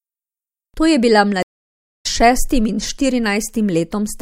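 At 1.43 s speech cuts to 0.57 s of silence, resuming at "šestim in" about 0.7 s further on: a stream reconnect restarting the decoder.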